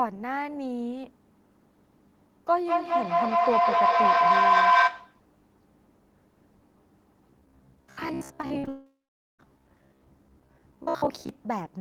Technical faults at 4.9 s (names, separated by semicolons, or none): feedback howl